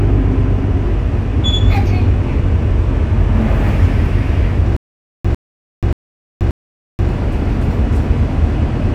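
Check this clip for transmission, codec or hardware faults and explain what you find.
There's one fault, a stutter with silent gaps from 4.77 to 7.09 s. A 100 ms burst repeats four times, every 581 ms, with about 481 ms of dead silence between. It's likely a stalled stream replaying its last fragment, so the audio in between is lost.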